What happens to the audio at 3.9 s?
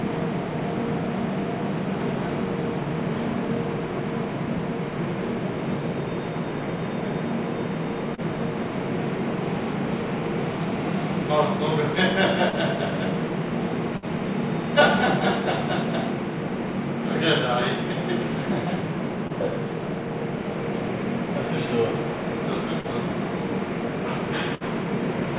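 Nothing goes wrong at 3.9 s: the sound carries on intact through that moment, heard through the narrowband G.711 call path with nothing above 4 kHz.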